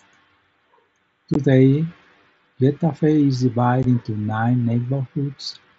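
At 1.34 s and 3.83 s the speech drops out for 15 ms with abrupt edges: unconcealed Bluetooth headset packet loss, where lost headset packets became silence, which fits two missing mSBC packets. Each shows as a flat waveform gap and a thin blank vertical stripe on the spectrogram.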